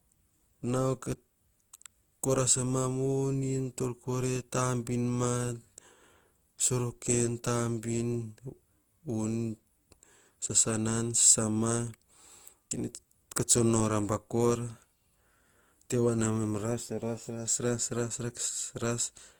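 From start to finish the speech carries a swirly, hollow smear, with consonant attacks blurred, worse than a single pass at a rate near 48 kbit/s would give. That excess marks generation loss rather than plain low bitrate: the audio was likely re-encoded about four times with Opus, each pass adding fresh quantisation noise.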